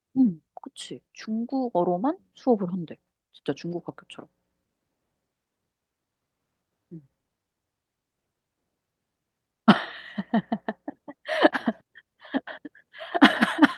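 Nothing stood out as a technical fault on listening to this speech recording.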